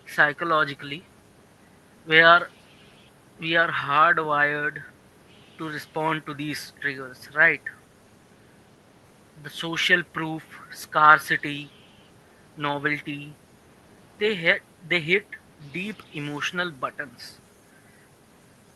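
Nothing goes wrong anywhere in this speech recording, which simply sounds like an ordinary call carried over Opus at 32 kbps with its audio reaching up to about 12 kHz.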